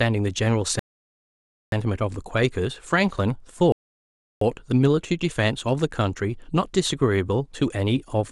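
At 0.79 to 1.72 s and again at 3.72 to 4.41 s, rebuffering stalls halt the speech when the player runs out of downloaded audio. Each falls silent, adding about 0.93 s and 0.69 s, then resumes exactly where it stopped. Unlike a dropout, nothing is skipped.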